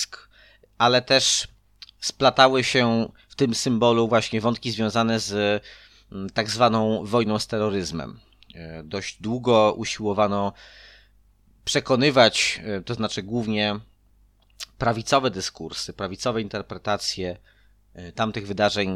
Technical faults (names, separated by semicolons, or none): none